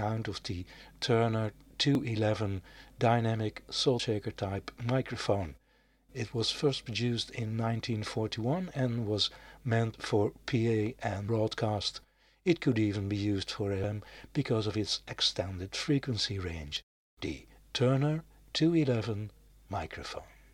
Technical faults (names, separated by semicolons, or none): dropped buffer (overrun)